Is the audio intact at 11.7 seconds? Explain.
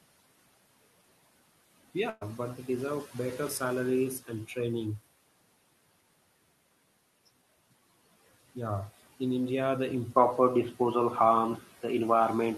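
No. From 10.16 s to the end, the input likely switched to a poorer device: the sound turns duller, shifts level by about 5 dB, and has no gap at the change. Throughout, including this moment, noise suppressor artifacts are present: background noise is pulled down by about 17 dB frame by frame, so it sinks between phrases.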